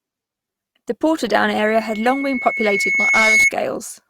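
From 1.61 s to 3.52 s, the speech carries loudspeaker feedback squeal. A microphone is picking up the loudspeaker it drives. At one frequency the loop gain tops unity, so that frequency feeds itself. Here it is a single tone at 2.2 kHz. It swells slowly over about two seconds and never settles. At its peak it sits roughly 5 dB above the speech. It ends at 3.52 s.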